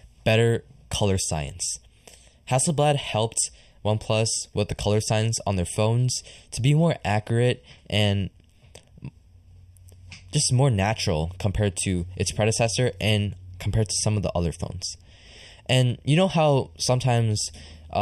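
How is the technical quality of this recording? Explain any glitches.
The recording has one fault, a channel delay causing comb filtering, present throughout. One channel arrives just under half a millisecond late. Mixed to mono, the shared speech cancels at evenly spaced frequencies, starting near 1.5 kHz. The speech sounds hollow and phasey.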